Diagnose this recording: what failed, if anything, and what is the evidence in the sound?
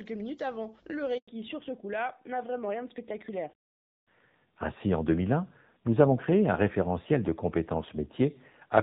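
The failure is at the network stage, a handover gap. While the call moved between networks, no speech frames arrived for 100 ms, from 1.18 to 1.28 s. The voice dies away within a few tens of milliseconds and leaves silence, so the speech in that span is lost.

At the codec stage, the call made a fallback to narrowband immediately after the handover. Before 1.18 s the sound has AMR-WB (HD Voice) bandwidth with light coding wear. From 1.28 s to the end nothing remains above 4 kHz, and the voice turns duller and rougher, which fits AMR-NB near 7.4 kbit/s.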